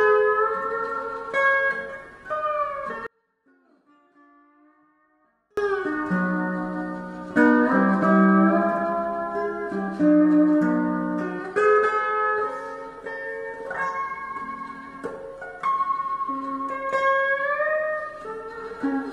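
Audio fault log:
3.07–5.57 s, audio dropout to a faint residue: the sound cuts away abruptly and for about 2.5 seconds only a thin, distant trace of it remains, roughly 35 dB below its normal level, before it snaps back just as suddenly. Nothing about the change resembles a pause or a fade. The likely cause is a break in the wanted feed while the path after it stayed live, so a weak leak of the signal kept passing through the gap.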